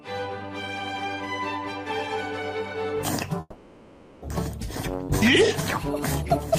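At 3.40 s the sound suddenly freezes into a fading buzz that lasts about 0.83 s, with a brief silence before it picks up again at 4.24 s. About half a second is missing, and it resumes roughly 0.3 s later than before, likely from a long network dropout.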